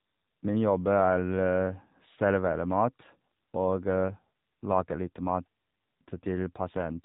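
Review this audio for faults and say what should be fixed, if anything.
Throughout the speech it sounds buzzy, synthetic and boxed-in, with nothing above 3.8 kHz. This is AMR narrowband mobile codec damage, with coarse pulse-driven vocal-tract modelling at a rate that fits about 7.4 kbps. To prevent it, record or route the audio over a wideband path so the speech keeps its upper band, or at least use a higher AMR bitrate for a more natural texture.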